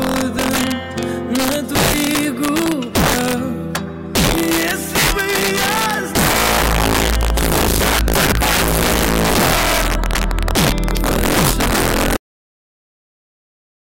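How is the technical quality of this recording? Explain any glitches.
The technical quality is poor, with two clear faults.

Integer overflow runs throughout: loud peaks pushed about 5 dB past full scale wrap to the opposite sign instead of limiting, producing harsh cracks on a small share of samples, roughly 7 percent.

A cut-off end occurs at 12.17 s: the final buffers were never written, so the sound stops abruptly mid-event and drops straight to digital silence without any decay.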